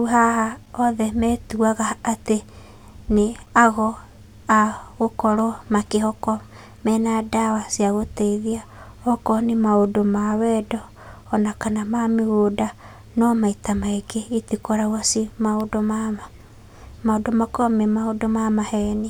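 From about 0.94 s to 18.73 s there's a steady tick roughly every 1.11 s, around fifteen in all. It sounds like clock drift buffer slips, likely two clocks disagreeing by something near 150 ppm, so a handful of samples get dropped or repeated each time.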